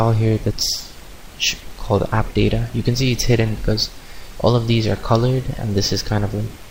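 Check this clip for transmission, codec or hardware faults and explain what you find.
Nothing here sounds like a transmission, codec or hardware problem; the audio just runs along without anything breaking in.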